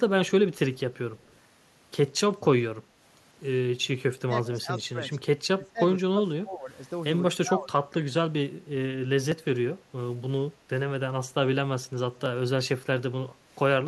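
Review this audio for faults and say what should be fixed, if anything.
Right at the start, from 1.22 to 1.37 s, there's a brief echo leak: a very faint copy of the speech trailing it by about 146 ms. That's likely the far end running on a loudspeaker, with its echo canceller letting a scrap of what the mic picked up slip back down the line. It's short and quiet, but it's there. To prevent it, have the far end use a headset or retune their canceller so it converges faster.

Then there's a run of speech suppressed in double talk at 4.15–5.0 s, 5.53–5.81 s, 5.99–6.7 s and 7.3–7.71 s. In each stretch the speech ducks hard, down by about 20 to 25 dB at its deepest, for a few hundred milliseconds at a time. The likely cause is an echo canceller that couldn't tell the local talker apart from loudspeaker echo while both sides were talking, so it clamped down on everything. Better double-talk detection, or a headset that removes the echo path, would prevent it.

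Finally, there are two isolated clicks from dropped samples, at 9.32 s and 12.26 s. Each is a sub-millisecond gap where the waveform jumps straight to a later value. Nothing audible goes missing, but you get a sharp tick and a thin vertical line in the spectrogram. The likely cause is a buffer underrun or a clock mismatch somewhere in the capture chain. Larger or better-synchronised audio buffers would prevent it.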